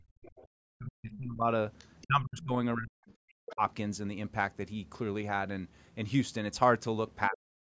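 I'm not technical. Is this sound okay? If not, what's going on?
No, it has two problems typical of a call where both people talk at once.

The first is speech suppressed in double talk. From 0.00 to 1.47 s, 2.03 to 2.54 s, 2.76 to 3.61 s and 7.29 to 7.74 s, the speech drops sharply, almost vanishing at times. This is likely the echo canceller turning down both this voice and the loudspeaker echo while both sides spoke.

The second is the other side's voice leaking through. Faint scraps of a second voice come through at 0.36 to 0.43 s, 1.78 to 2.07 s and, a bit louder, 3.50 to 3.54 s. These are likely bits of the loudspeaker sound the echo canceller missed.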